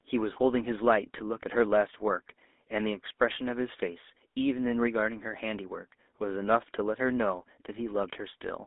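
GSM full-rate codec coding runs through the whole of this speech recording, plainly audible as a buzzy, gravelly roughness on every syllable. The codec reduces the voice to a vocal-tract filter driven by a sparse, regularly spaced pulse excitation, so the natural texture is replaced by that grainy buzz, which fits the 13 kbps full-rate coder. The line band is confined to about 250 Hz to 3.6 kHz, so the sound is thin at the bottom and dull at the top. GSM bit errors break in from 1.06 to 1.23 s, where the voice briefly squawks and gargles. Corrupted filter, pitch and gain parameters reached the decoder, warping the spectrum and jolting the level frame by frame. The burst sounds like several consecutive damaged frames, consistent with an error rate near 1% on a weak radio link.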